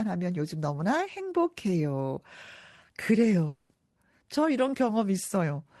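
From 3.47 to 3.71 s the speech gives way to a fading buzz that smears the last sound across the gap, with no true silence, and resumes further on with a stretch missing. This is likely a long network dropout, with the receiver concealing the lost audio through the call codec path, whose top sits near 12 kHz.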